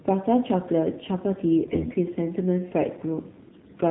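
Throughout the clip the speech passes through the AMR narrowband mobile codec. Nothing above 4 kHz survives, and the voice has the plainly audible buzzy, synthetic edge of a vocal-tract model fed with only a few excitation pulses. The thin texture fits a low AMR-NB mode of about 7.4 kbps. Simple band-limiting would leave a muffled but natural voice. Here the timbre itself sounds artificial.

From 1.64 to 1.96 s, and again from 3.48 to 3.71 s, AMR bit errors make the voice hoarse, scratchy and gargly. The first stretch spans about 16 frames, with roughly 7 percent of bits flipped. The second spans about 11 frames and is harsher, with roughly one bit in ten flipped. The unprotected bits are corrupted, so the excitation pulses land in the wrong places, while pitch and loudness roughly hold. That sets the errors apart from lost frames, which leave gaps, repeats or fades instead of this rasp.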